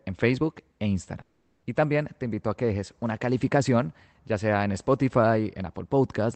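A long network dropout runs from 1.21 to 1.65 s, likely from packets ceasing to arrive. For 0.42 s the receiver stretches the last sound into a fading buzz that fills the whole gap, then the speech resumes past the lost stretch.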